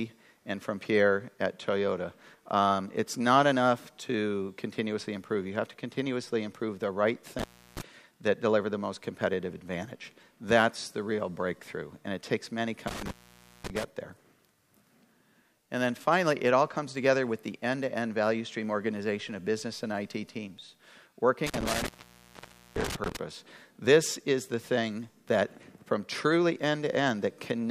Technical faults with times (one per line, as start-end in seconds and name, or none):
7.39-7.81 intermittent contact
12.87-13.84 intermittent contact
21.46-23.17 intermittent contact